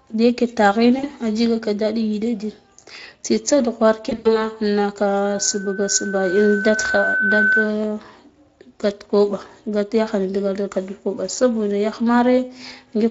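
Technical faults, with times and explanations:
0.99–1.06 s and 4.09–4.50 s: VoIP packet loss concealed by the speech codec. About 40 ms, then 120 ms scattered after "tsitsa dughwara", were lost. The decoder extrapolated, smearing speech into a fading buzz.
5.25–7.76 s: loudspeaker feedback squeal. The microphone-to-loudspeaker loop exceeded unity gain at 1.5 kHz. The tone swells over roughly two seconds to sit about 5 dB above the speech.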